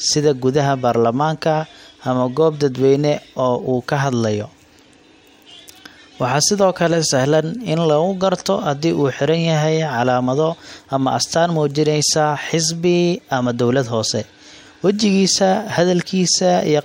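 No technical faults are audible.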